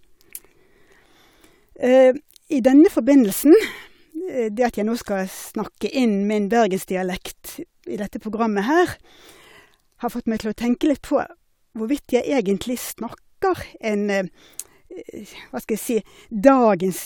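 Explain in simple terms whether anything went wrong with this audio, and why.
Nothing stood out as a problem on listening to this speech recording.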